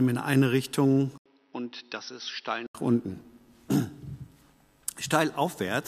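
From 1.18 to 2.75 s, after an 80 ms gap, the sound turns dull and quieter, cut above 5.9 kHz. Likely an input switched to a poorer device.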